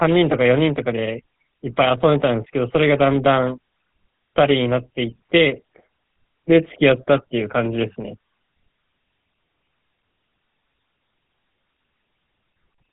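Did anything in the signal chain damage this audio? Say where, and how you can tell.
Yes, the codec stage: the whole clip has GSM full-rate roughness, buzzy and gravelly, with nothing above 4 kHz. That's regular-pulse excitation, consistent with a 13 kbps stream.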